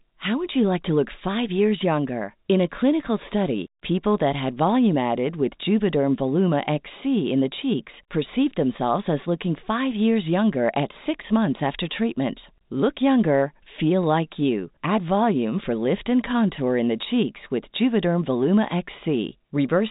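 No technical faults are audible in this speech recording.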